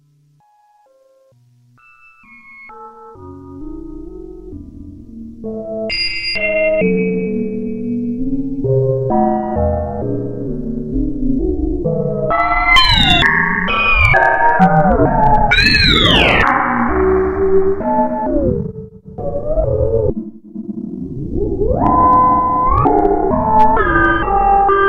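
Everyday sound with hard clipping at 12.4–13.26 s and 14.01–16.5 s, driven about 5 dB over full scale, then shorter bursts at 21.87–22.13, 22.78–23.05, 23.59–23.64 and 24.05 s, about 1–3 dB over. Peaks are sliced flat, giving abrupt, crackly high-frequency fuzz rather than soft saturation's gradual, rounded thickening.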